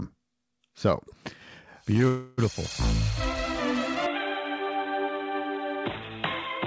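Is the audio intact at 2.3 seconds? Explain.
No. From 2.08 to 2.40 s there is a call audio freeze. The last sound is stretched into a fading buzz for about 0.3 s, with no true silence. This is likely a stall in packet arrival that let the jitter buffer run dry. Unlike a packet-loss dropout, nothing is cut out. The audio resumes exactly where it stopped, so everything after it arrives about 0.3 s later, still band-limited below 8 kHz by the call codec.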